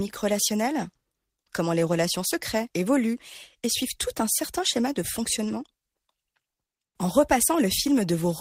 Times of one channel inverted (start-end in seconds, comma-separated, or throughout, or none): none